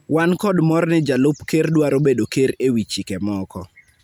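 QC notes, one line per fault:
No technical faults can be heard anywhere in the speech signal.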